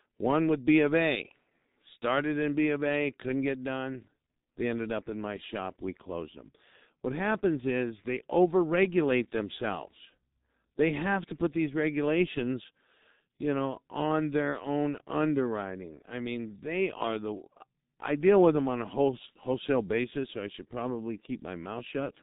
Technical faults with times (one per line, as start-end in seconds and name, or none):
0.00-22.23 G.723.1 codec